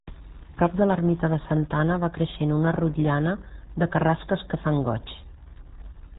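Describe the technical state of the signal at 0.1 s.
At 0.1 s you're already hearing the RealAudio 14.4 codec, and it runs the whole clip. The speech is squeezed hard enough to suggest an 8 kbit/s dial-up-era coder, with nothing above 3.8 kHz, so it comes across heavily muffled and gargly.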